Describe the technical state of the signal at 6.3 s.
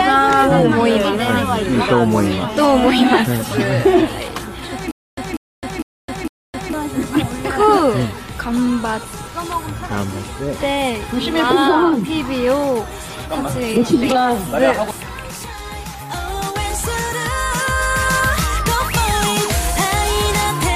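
At 6.3 s the signal is inside a stutter with silent gaps running from 4.91 to 6.73 s: a 193 ms fragment repeats four times, each followed by 263 ms of digital silence, likely a stalled stream replaying its last buffer. The dead gaps distinguish it from a seamless loop.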